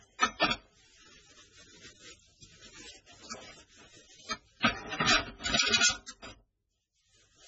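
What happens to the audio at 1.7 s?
At 1.7 s the sound carries MP3 compression damage, present throughout and likely from a very low bitrate near 16 kbps: nothing above 7.8 kHz, leaving a flat spectrogram ceiling and swirly, watery texture.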